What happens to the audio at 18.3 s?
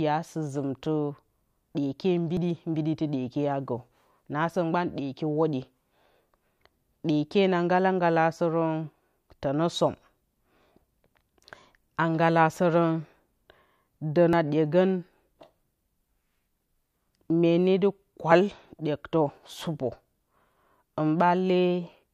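At 18.32 s, just before "ɗyektǝ sɨpǝ", a tiny piece of speech, around 15 ms, is skipped and the two sides butt together with no gap. This is audio missing between chunks, likely lost at a 4-second chunk boundary. Unlike a dropout, it leaves no silence.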